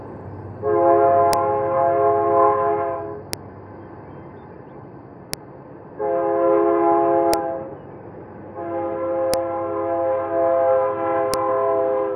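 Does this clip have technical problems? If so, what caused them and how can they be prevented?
Yes. A file header is played as audio, heard as a sharp, loud click at 1.33, 3.33, 5.34, 7.34, 9.34 and 11.34 s. The snaps come every 2 s, which fits separate 2-second pieces joined end to end. Each piece kept its header. Those few dozen bytes were read as samples, so each one bursts out as a click whatever the sound is doing. To prevent it, strip the header from every piece before joining or streaming them.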